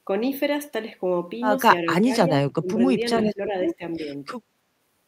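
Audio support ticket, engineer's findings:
Echo canceller likely clamping near talker along with echo in double talk; speech suppressed in double talk at 1.85–2.1, 2.27–2.82, 3.2–3.82 s; dips about 10–20 dB.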